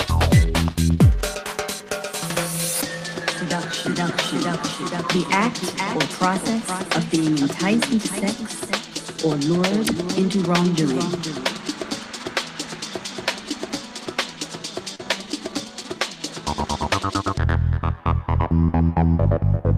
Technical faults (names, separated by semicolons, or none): short concealed packet loss